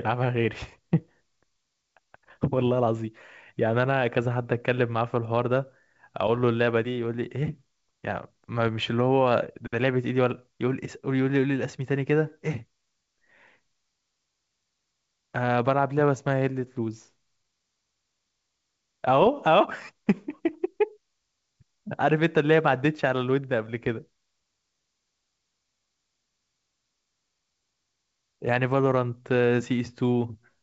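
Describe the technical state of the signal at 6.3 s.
Short pops and a rough, crackly burst with brief jumps in level run from 6.28 to 6.39 s. These are bit errors on an ADPCM link: flipped bits, at a rate of perhaps 0.2 percent, throw off the decoder's step size and predictor, so each error rings on for several milliseconds.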